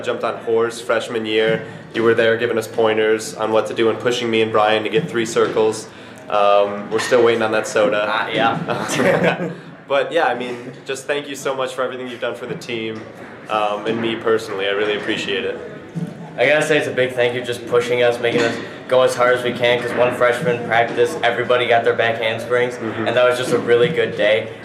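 From 0.89 to 2.89 s, sample clock jitter of about a microsecond mistimes samples, adding a hiss roughly 45 dB below the signal that follows steep, loud passages.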